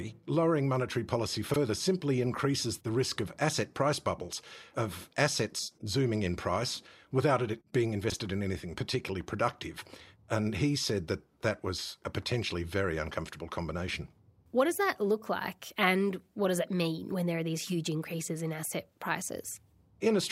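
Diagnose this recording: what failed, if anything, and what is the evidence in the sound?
Chunks out of order, a buffer or network reordering fault: at 1.50–1.56 s, after "lowering monetary policy", and 8.10–8.14 s, before "in anything particularly productive", 20 ms blocks play late, by two and one. The waveform shows abrupt step joins, and the spectrogram shows briefly shuffled segments.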